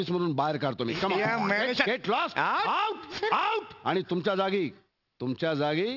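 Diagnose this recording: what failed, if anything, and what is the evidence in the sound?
Sample-rate conversion dropped the rate without an anti-alias filter, causing aliasing throughout: content above 6 kHz folds back as gritty, metallic tones about 20 dB down.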